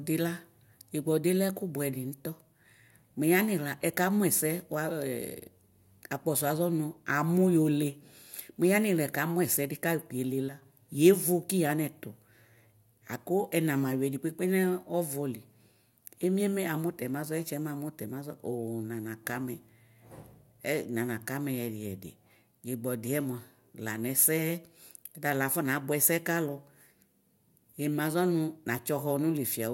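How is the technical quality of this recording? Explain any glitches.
The recording has one clear glitch, a sudden gain jump. From 10.49 to 10.62 s the speech and the background noise drop together by about 6 dB, then return to their earlier level. Because the level changes between one sample and the next instead of fading, this is likely a digital gain setting applied without a ramp. The waveform shows an abrupt step down in the envelope and a step back up. On a spectrogram, the whole frequency range dims at once for that short stretch.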